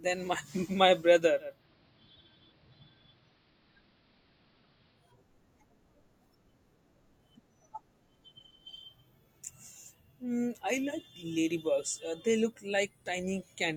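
Just after "my brother", at 1.39 s, the sound dulls over about 0.3 s: the level dips by about 2 dB, and a faint hiss sits well beneath the speech. At 5.2 s it cross-fades back to full clarity. This is digital radio blending to analogue: the receiver lost its digital signal and faded across to the station's AM broadcast, whose narrow bandwidth and noise floor produce that muffled, hissy stretch, before returning to digital.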